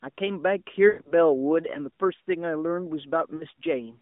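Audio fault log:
0.88–1.12 s, lost AMR speech frames: about 140 ms missing across 160 ms, longest run 120 ms. The narrowband decoder (line band 200 Hz–3.6 kHz) holds the last pitch and vocal tract settings with falling gain, so the sound smears, fades toward silence, then returns weak.
3.36–3.45 s, lost AMR speech frames: a 40 ms gap, consistent with two 20 ms frames, heard as a brief dip or warble where the decoder briefly repeats its previous settings.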